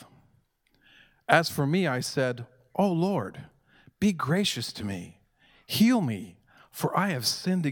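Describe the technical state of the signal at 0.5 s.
At 0.5 s the speech signal is intact, with no audible technical fault at that moment.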